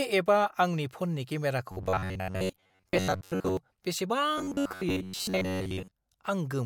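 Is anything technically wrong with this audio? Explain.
Yes. After "एपआ आंनि फननि", from 1.72 to 3.57 s, and again from 4.38 to 5.91 s, the speech becomes a rigid metallic buzz near 94 Hz. This is robotic sound, likely from repeated short buffers of about 11 ms replacing most of the real audio.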